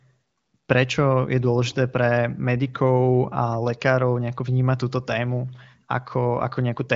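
Nothing stood out on listening to this speech recording.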